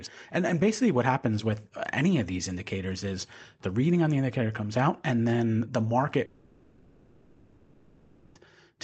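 Speech over what sounds like a call link, with the top end stopping around 8 kHz, and from 6.25 to 8.37 s the sound smears into a buzzy, hissy continuation of the last bit heard, about 2.1 s long, before normal audio resumes. That's most likely a long network dropout, where the receiver papered over the missing packets and the real audio for that stretch never made it.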